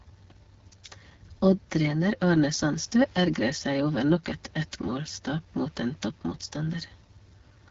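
Throughout, AMR wideband (HD Voice) codec coding at a rate fitting 8.85 kbit/s makes the speech rough and raspy. A spectrogram shows nothing above 7.6 kHz.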